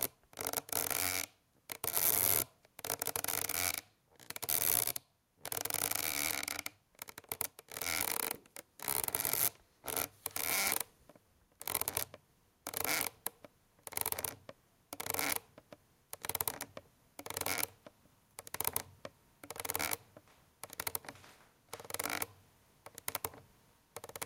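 Gain pumping runs through the whole clip: the input gain was likely set far too high, so a fast limiter clamps down on every loud sound. The level swings by around 10 dB as it ducks under louder events, leaving everything squashed and breathing.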